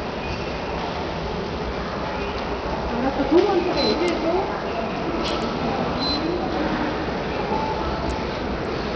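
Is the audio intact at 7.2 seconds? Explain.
No. At 7.2 seconds the sound carries heavy damage that runs through the whole clip, likely from Bluetooth SBC compression. The treble drops out and flickers, with gritty noise and aliasing on top. Too few bits reach the upper sub-bands, which fits a low SBC bitrate near 64 kbps.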